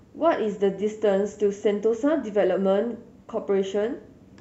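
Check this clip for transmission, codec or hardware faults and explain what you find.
Nothing to flag on this speech recording; no faults found.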